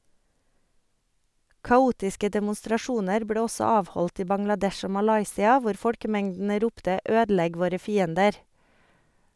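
No technical faults can be heard anywhere in this speech recording. Nothing in the audio calls for a timestamp or further comment.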